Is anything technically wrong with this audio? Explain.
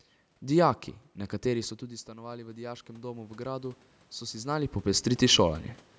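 Yes, there's one. From 1.46 to 4.78 s you get automatic gain rising. Around 1.5 s the talker seems to drift away from the mic, so the input drops by about 15 dB. The gain control reads that as a quiet source and slowly brings its gain up by about 10 dB over those three-odd seconds. You hear the voice and the room noise swell together, the background creeping up with it, until the talker moves again around 4.5 s.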